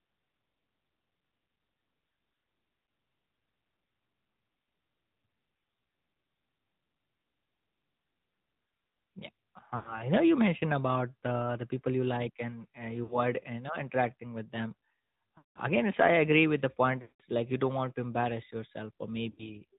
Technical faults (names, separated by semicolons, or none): AMR narrowband mobile codec; lost AMR speech frames